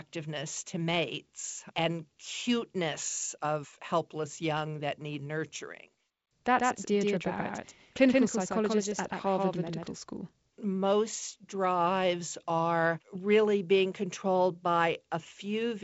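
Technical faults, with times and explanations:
6.59–9.93 s, doubled audio track: the speech abruptly gains a dry slapback echo, a full-band copy trailing by around 150 ms and roughly 5 dB quieter, with no decay or room colour. A second, slower capture path was likely mixed in.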